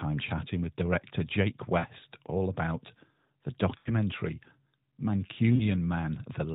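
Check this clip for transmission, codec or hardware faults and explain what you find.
The clip has one fault, lost AMR speech frames, occurring three times over a narrowband AMR phone path whose light coding fits its 12.2 kbps mode. The losses occur at 1.80–1.86 s (just before "all about the"), at 3.78–3.91 s (right after "all about the"), and at 5.56–5.63 s. Corrupted frames failed their check, and the decoder filled each gap by repeating the last good pitch and vocal tract settings at falling gain. The shorter losses, about 40 ms each and consistent with two 20 ms frames, come out as a brief warbly dip. The 80 ms loss at 3.78 s is long enough to smear into a drawn-out tone that fades before sound returns weak or rough. Unlike a hard dropout, these gaps never fall to abrupt silence or click; the sound stretches and decays.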